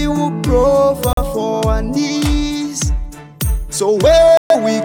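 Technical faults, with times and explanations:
1.13–1.23 s and 4.37–4.56 s, digital broadcast dropout: the sound cuts or quickly fades to silence for about 0.1 s, then again for about 0.18 s, resuming each time further along, with what was sent meanwhile lost. The receiver stopped getting valid frames and muted until clean ones arrived. The gaps fit one lost frame of about 43 ms, then three. On a waveform each is a flat line; on a spectrogram, a full-height blank vertical band.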